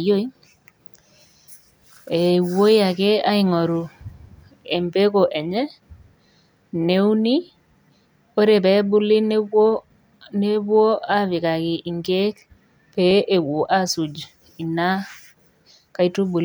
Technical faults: dropped buffer (overrun)

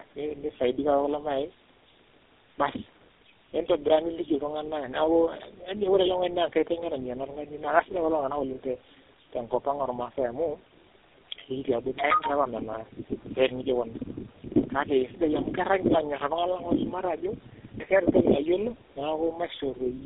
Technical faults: tandem speech coding

